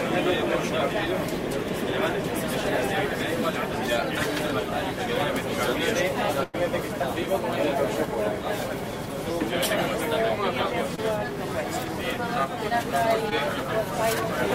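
At 6.43 to 6.55 s, a burst of packet loss removes about 100 ms of audio. The receiver extends the preceding sound and fades it down, so a fading buzz or hiss is heard, followed by a jump ahead. On a spectrogram, smeared, decaying bands lead straight into new material, with no silent gap.

At 10.95 to 10.99 s and again at 13.29 to 13.33 s, short concealed packet loss fills about 20 ms and 17 ms gaps with continued sound. Each is heard as a brief smear or wobble. A spectrogram shows a thin blurred slice.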